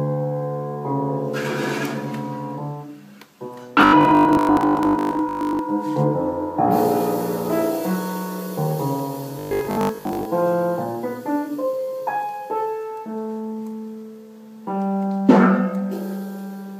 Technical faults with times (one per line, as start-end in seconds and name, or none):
3.81-5.59 robotic sound from repeated short buffers
9.39-10.27 robotic sound from repeated short buffers